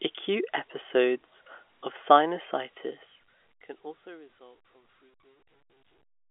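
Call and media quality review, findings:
No faults found: the speech sits within the G.711 A-law telephone band of 300 Hz to 3.5 kHz with nothing above 3.7 kHz, and its level fades out smoothly from around 2.5 s to the end.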